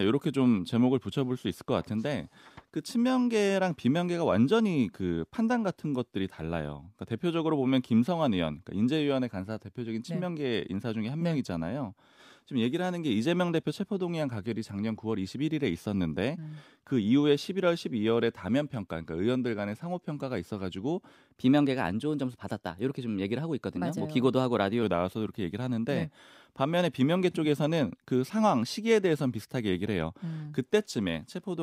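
A wrong sample rate affects this speech recording from 21.37 to 24.83 s. The samples are played out faster than they were captured, with no rate conversion. The speed-up of 1.09 times and the pitch rise of about 1.5 semitones fit 44.1 kHz audio being played at 48 kHz. Because nothing resamples the stream, tempo and pitch shift together, so the speech turns higher and more hurried for those three and a half seconds.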